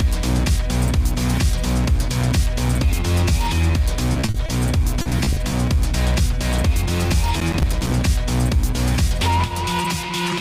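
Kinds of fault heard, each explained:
Repeated packet loss (robotic sound): from 4.13 to 5.54 s, 13 gaps up to 40 ms each get patched by stretching the previous sound, leaving it choppy with bits missing.
Processor overload crackle: from 7.39 to 7.92 s, missed deadlines drop in about fifteen tiny silent holes, which fits buffers of around 5 ms, heard as a brief crackly burst.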